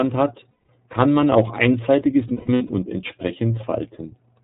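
From start to end the speech has a thin, band-limited quality with nothing above 4 kHz, and a slightly rough, synthetic edge that is plainly audible. This is the iLBC codec, a narrowband VoIP coder that codes each frame's excitation on its own. The sound fits its 13.33 kbps mode with 30 ms frames, where the bandwidth limit and the coarse excitation modelling cost the voice its air and smoothness.

At 0.51 s, just before "kann man auch einseitiges", the voice turns into a held, faintly buzzy vowel for 180 ms, until 0.69 s. A second, broken patch runs from 2.28 to 2.71 s, right after "kann man auch einseitiges". There about 270 ms of sound is lost in pieces spread over 420 ms, the longest stretch lasting around 150 ms. These are lost iLBC frames. The decoder fills each gap by repeating the last pitch cycle mixed with noise, and because each frame stands alone, normal speech returns as soon as packets arrive again.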